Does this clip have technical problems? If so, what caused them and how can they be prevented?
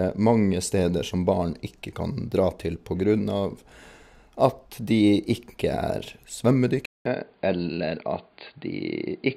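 Yes. From 6.85 s the speech turns dull and boxy after a 200 ms silence, with nothing above 4.8 kHz, a faint new background noise and little change in level. This is likely an input switched to a poorer device, such as a headset's call profile, which passes a narrower band. Fixing the recording input in the system settings before starting prevents it.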